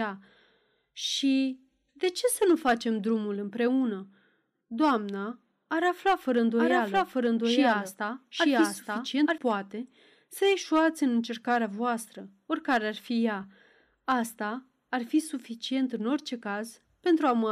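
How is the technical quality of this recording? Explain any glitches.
A doubled audio track runs from 6.58 to 9.38 s, starting just after "ar afla fără" and ending just before "poate să ieșuați în". A second full-band copy of the speech trails the original by roughly one second at about the same level, most likely because the audio was captured again through a slower path or an edit left two copies out of step. The copy is dry, with no decay or room colour, and it starts and stops abruptly.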